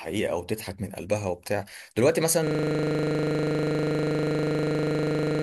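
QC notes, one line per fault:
2.47 s to end: system hang loop. From 2.47 s the sound stops moving forward and one 40 ms slice repeats exactly, about 74 times, at 25 Hz until the clip ends. That points to a frozen system with the hardware still replaying a ring buffer of about 40 ms. Packet-loss concealment smears and fades, but these repeats are identical and never decay, giving a rigid, low 25 Hz buzz instead of a recovering glitch.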